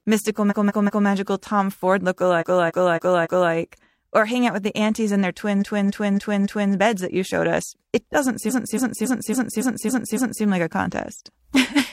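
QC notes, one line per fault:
0.47–1.03 s, 2.37–3.49 s, 5.58–6.69 s (after "the aunties in their", before "beds that you showed") and 8.46–10.41 s (after "showed us it doesn't", before "like a"): repeated frames. A block of compressed audio plays again and again: 185.8 ms three extra times, then 278.6 ms four, four and seven extra times, so the sound stutters in place and the clip runs about 4.7 s long. On a spectrogram, identical patches tile side by side; the waveform repeats the same shape at even intervals.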